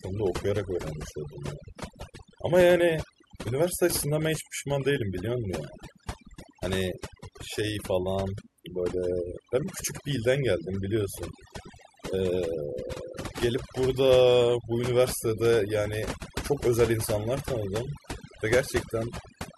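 Across the whole recording, the pauses between phrases sink to near silence scattered with twinkling specks, and the speech itself has its quieter detail hollowed out. This is overdone noise removal: a noise reduction process set too aggressively cuts individual frequency bands deep down or off whenever they sit close to its noise estimate, so low-level parts of the voice are stripped away along with the background noise.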